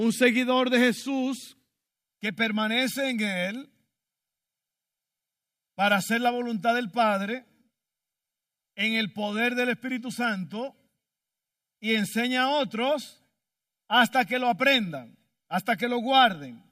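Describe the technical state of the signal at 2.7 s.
At 2.7 s the speech is affected by channel delay (comb filtering), which runs from 1.88 s to the end of the clip at 16.72 s. One channel lags the other by roughly a millisecond and a half, so when the two are combined to mono, shared content cancels at regularly spaced frequencies, the first notch falling somewhere near 400 Hz. The result is a hollow, phasey tone with fixed spectral notches.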